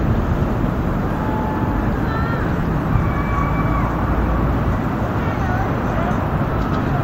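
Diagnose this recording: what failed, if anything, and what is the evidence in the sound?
Lost LE Audio frames on the Bluetooth link: the LC3 decoder covered each gap by replaying the previous spectrum with randomised signs. Brief noisy smears appear at 0.39–0.41, 2.61–2.63, 4.14 and 6.51 s, gaps of 20 ms and 10 ms that fit 10 ms frames.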